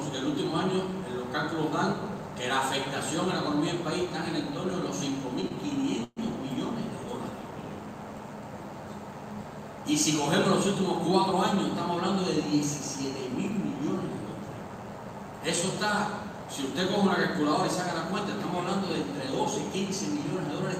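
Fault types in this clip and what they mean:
Call audio freeze: At 6.04 s the sound stops moving forward until 6.19 s. For 126 ms the last moment is stretched into a fading buzz or hiss. Then 20 ms of silence follows. Nothing is skipped. The audio resumes exactly where it stopped, so everything after it runs 126 ms late. The likely cause is a network stall that emptied the receiver's jitter buffer, so the receiver filled the wait with that fading tail.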